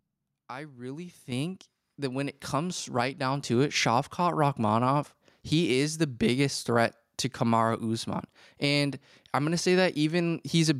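At 1.32 s, just after "I really", the microphone volume stepped up. The call software judged the input too quiet and raised the device gain in one jump, about 9 dB. Voice and background noise both get suddenly louder together, mid-sentence.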